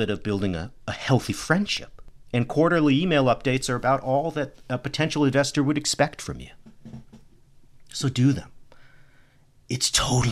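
A scratch on the disc destroys more data per revolution than error correction can rebuild, so the player patches or mutes those samples. From 1.77 to 2.54 s, after "building a a healthy" and before "email updates are about", CD scratch ticks produce four sub-millisecond clicks.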